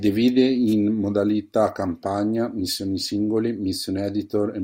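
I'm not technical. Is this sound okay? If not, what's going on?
No. At 0.67 to 0.74 s there is a wireless microphone noise hit: the radio link from the microphone briefly weakened as reflected signals cancelled out. The receiver's own hiss rose, producing a short swish of static over the speech.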